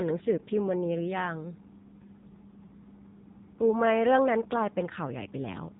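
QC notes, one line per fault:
Throughout: AMR narrowband mobile codec. The speech is confined to a phone-style band with nothing above 3.8 kHz, so sibilants and breath detail are gone and the sound is thin and boxy. Heavy coding damage gives a buzzy, synthetic texture, because each 20 ms frame rebuilds the voice from a vocal-tract filter driven by sparse pulses. The degree of roughness fits a low AMR-NB mode of around 6.7 kbps.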